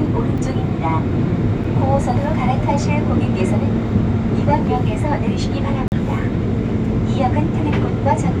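Ticks at 0.38 s and 1.64 s, then a brief hole from 5.88 to 5.92 s: blocks of digital silence, where the sound cuts out abruptly and back.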